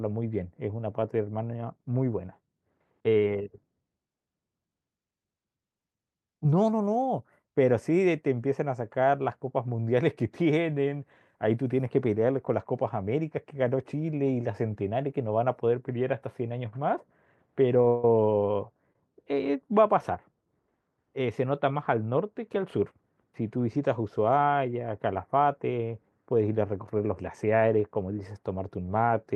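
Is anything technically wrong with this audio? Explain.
Yes. This speech clip has three kinds of timing fault.

At 17.82 to 17.85 s, 17.85 to 17.88 s and 18.93 to 18.96 s, the sound is briefly held with a faint buzz or dip. These are short stalls from a late packet: the jitter buffer ran dry and the receiver stretched the last sound by 16, 17 and 21 ms.

From 17.88 to 18.05 s, the sound freezes into a fading buzz or hiss lasting 158 ms, then resumes with nothing lost. This call audio freeze was likely caused by packets held up in transit.

From 26.84 to 28.02 s, the speech sounds hurried at unchanged pitch, running at 109% speed. In this jitter buffer speed-up, the receiver trimmed about a tenth of a second of pitch periods to reduce its excess delay.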